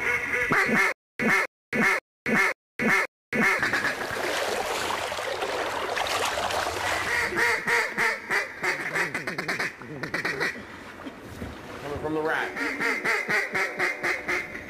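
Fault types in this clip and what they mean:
Stutter with silent gaps: From 0.92 to 3.59 s, a 0.26 s burst of sound repeats five times. Each burst is followed by 0.27 s of silence, every 0.53 s. A stalled stream likely replayed its last fragment, and the audio due then is lost.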